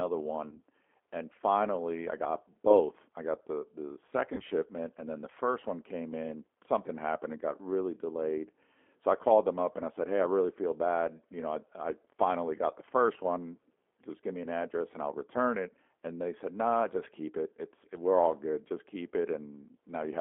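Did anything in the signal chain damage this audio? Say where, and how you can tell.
Yes. At the codec stage, G.729 coding runs through the whole clip. The band is confined to roughly 300 Hz to 3.5 kHz, and the speech has a rough, synthetic edge from rebuilding it at 8 kbit/s. A spectrogram shows nothing above 3.5 kHz and smeared harmonics.

At the network stage, VoIP packet loss concealed by the speech codec appears at 0.49–0.60 s and 4.35–4.44 s. Each gap is about 30 ms of missing audio, which fits a single lost packet. The decoder extrapolates from the last pitch and filter into a fading buzz or coloured noise, and the recovery runs past the gap. A waveform shows a decaying stretch, and a spectrogram shows the held spectrum tapering off.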